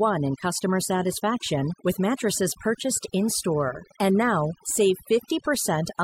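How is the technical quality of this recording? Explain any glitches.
Technical quality is held back by one fault, overdone noise removal, which runs through the whole speech recording. A noise reduction process was pushed too hard, so frequency bands sitting close to its noise estimate get cut deep or muted entirely, taking the softer parts of the voice along. Pauses drop to near silence sprinkled with twinkling specks. On a spectrogram the background shows as dark gaps scattered with isolated bright dots, and the speech harmonics look patchy and eaten away.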